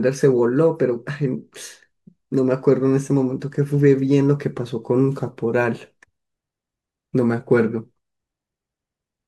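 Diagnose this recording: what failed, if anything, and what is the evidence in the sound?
Nothing in the recording points to a failure at any stage, from the wiring and converter through to storage and playback. The speech carries on without any audible event that would call for a diagnosis.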